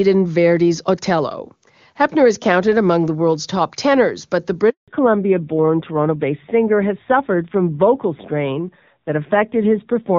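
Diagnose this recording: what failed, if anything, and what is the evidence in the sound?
Handover gap, network stage: right after "top tenors but the", speech drops out from 4.70 to 4.88 s, 180 ms with no frames during the link switch.

Fallback to narrowband, codec stage: from 4.88 s on, nothing above 4 kHz passes. The call has left HD Voice, so speech sounds duller and rougher.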